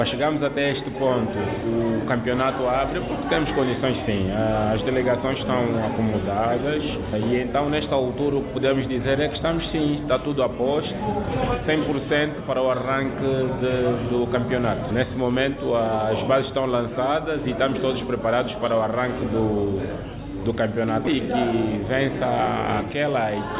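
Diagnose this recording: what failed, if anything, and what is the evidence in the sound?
Nothing failed in this recording.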